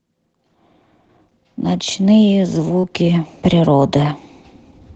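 At 2.79 to 2.86 s comes short concealed packet loss: about 40 ms of the speech arrived too late to decode, and the receiver extended the preceding sound to fill the gap before blending back. It sounds like a brief smear. On a spectrogram it appears as an unnaturally smooth, repetitive patch, and on the waveform as copied, regularised cycles. All of this comes through a call path whose spectrum stops near 8 kHz, which fits Opus at about 20 kbps.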